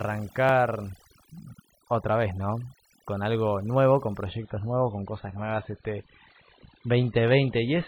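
From the start and through the whole clip, the background sits at near silence scattered with twinkling specks, and the voice has its softer parts hollowed out. This is overdone noise removal: a noise reduction stage set far too aggressively pulls individual frequency bands down or off whenever they come close to its idea of the noise floor. Quieter components of the speech get caught in that net and vanish along with the hiss.

At 0.49 s there is a small jump in the sound, with no silence before or after it. The likely cause is a dropped buffer (overrun): the recording software did not collect its samples before the hardware wrote over them. The lost piece is very short, under two milliseconds. The audio on either side of the gap is butted straight together, and that abrupt seam is what produces the jump.

From 4.27 s to the end, the sound turns suddenly duller, with smeared, swirly codec artefacts and nothing at all above 4.5 kHz. 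There is no gap at the switch. This is an adaptive stream dropping to a lower bitrate: the player moved from a high-quality MP3 version to a far more heavily compressed one. The hard top-end cutoff and the artefact level point to a step down to roughly 16 kbit/s MP3.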